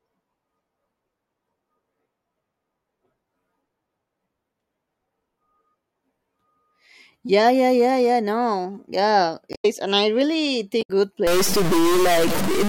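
At 9.52 to 9.65 s, just before "and I really", a short stretch of damaged data in the compressed stream breaks up the speech. The decoder cannot make sense of the corrupted frames, loses its place and hunts for the next valid frame header. The result is a brief glitch in the sound. The same fault returns at 10.79 to 10.90 s, right after "and I really", with a similar blip.

From 11.27 s to the end of the clip, the speech takes on a distorted quality. The quieter moments between sounds are also filled with a gritty noise floor instead of falling silent. The likely cause is a stuck bit, where one data bit is held at a fixed value. About half the samples are then pushed off by that bit's weight, following the waveform, and the error flips around zero so low-level passages turn into noise.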